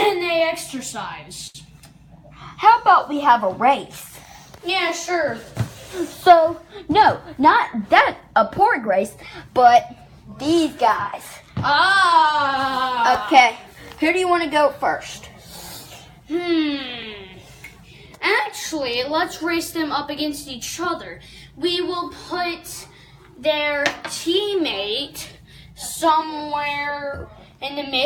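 At 1.47 to 1.57 s there is a short stall from a late packet. The jitter buffer ran dry, so the receiver held the last sound for about 72 ms until the packet arrived, then resumed without losing anything. It is heard as a briefly sustained sound with a slight buzz or dip.

From 6.89 to 8.90 s a jitter buffer speed-up follows. Excess buffered audio was trimmed by repeatedly cutting pitch-period-length fragments, removing around 70 ms in total. Playback runs at 104% speed with unchanged pitch.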